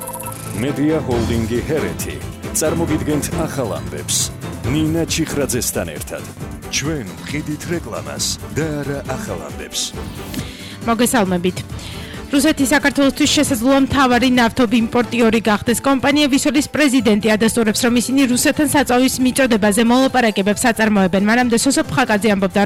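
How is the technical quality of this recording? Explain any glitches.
The technical quality of this recording is sound, and there are no glitches to explain.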